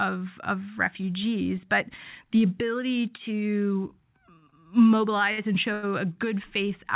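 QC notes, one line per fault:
4.38–4.44 s, 4.50–4.54 s, 5.32–5.40 s, 5.74–5.85 s: short stall from a late packet. Each time the jitter buffer ran dry, the last sound was stretched for 38, 22, 56 and 91 ms, then playback resumed with nothing lost, giving held segments with a slight buzz or dip over the 4 kHz-limited call audio.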